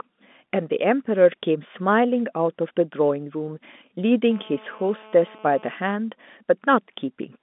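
It's a speech recording over a telephone line, band-limited to roughly 200 Hz to 3.6 kHz in the way G.711 telephone coding sounds. From 4.31 to 5.74 s, a hard, raspy GSM phone buzz cuts in at about 217 Hz, about 25 dB below the speech. A 2G handset nearby was pulsing its transmitter 217 times a second, and the audio circuitry rectified those bursts into a harmonic-rich drone. It holds steady throughout, as during an active call.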